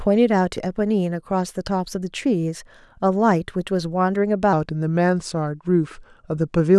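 A section at the wrong speed runs from 4.53 s to the end at 6.78 s. The speech slows to about 0.89 times its recorded rate and drops roughly two semitones, sounding deeper and dragged, likely from playback against a mismatched clock.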